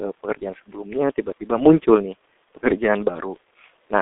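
Muffled, hoarse speech runs through the whole clip, with consonants smeared together and no brightness above about 3.6 kHz, while the low end thins out below roughly 300 Hz. This is the signature of the G.723.1 codec, an early internet-telephony coder that packs the signal into 30 ms frames and rebuilds it from a slowly updated vocal model. The heavy damage heard here fits a very low bitrate around 6 kbit/s.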